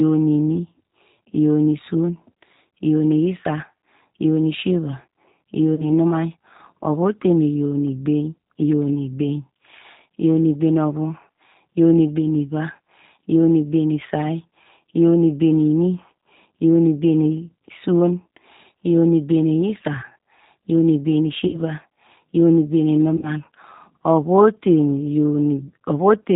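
Throughout, the speech passes through the G.729 codec, which rebuilds it from a vocal tract filter, a pitch predictor and sparse pulses at a rate that fits 8 kbit/s. Nothing above 4 kHz survives, and the damage is plainly audible as a rough, synthetic texture.

VoIP packet loss concealed by the speech codec follows at 5.75 to 5.88 s, where 30 ms went missing, which fits one lost packet. It returns at 21.47 to 21.61 s and 23.17 to 23.31 s, where 60 ms went missing each time, which fits two packets. The decoder extends its last pitch and filter while lowering the gain, so the sound smears into a fading tone or coloured noise. It stays weak or distorted briefly after packets resume.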